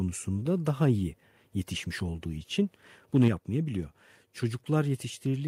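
From 3.15 to 3.28 s the speech turns harsh and crackly. This is microphone overload. The peaks push about 3 dB past the converter's limit. Their tops are flattened, and a small share of the samples are clipped. The likely cause is an input level set too high.

At 3.28 s, right after that distorted burst, the microphone volume steps down. The speech and the background both drop by about 4 dB at once. The likely cause is call software that reacted to the clipping and lowered the input volume in a single step.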